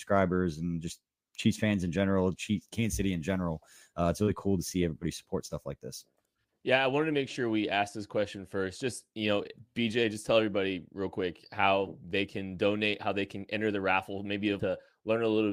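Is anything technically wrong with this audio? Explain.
Yes. Between 14.59 and 14.64 s, just after "enter the raffle maybe", there is a stream segment skipped fault. The likely cause is that one chunk of the segmented stream failed to arrive, and the player moved straight on to the next one instead of waiting or retrying. The result is an abrupt jump in the speech: the sound cuts forward with a brief blip at the join, and part of the programme is simply gone.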